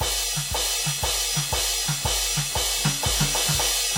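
Throughout the music, the sound rings and washes, with a hiss that rises and falls with the signal, and nothing above 17.5 kHz. This is likely WMA compression, fitting about 48 kbps. Long transform blocks smear noise across tens of milliseconds, unlike steady broadband hiss.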